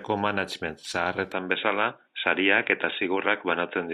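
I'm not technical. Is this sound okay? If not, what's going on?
No. From 1.32 s the speech turns dull and muffled, and the level shifts slightly. This is likely an input switched to a poorer device, one that drops everything above 3.8 kHz.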